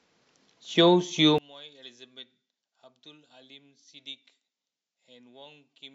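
From 1.38 s on, speech sinks about 26 dB to a faint residue rather than quieter full sound: likely one channel inverted, cancelling in mono.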